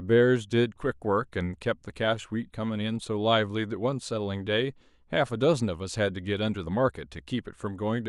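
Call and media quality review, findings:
Nothing to flag on this speech clip; it all sounds fine from the first moment to the last.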